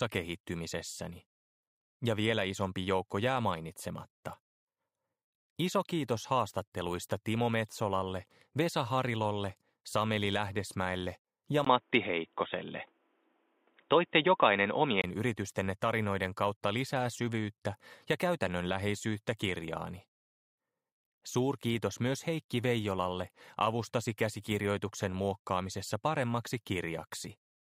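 At 11.65 s there's a 20 ms gap, then the sound goes dull and boxy with nothing above 3.8 kHz, a few dB different in level and over a faint new noise floor, until 15.04 s. That's likely the input switched to a poorer device, then back.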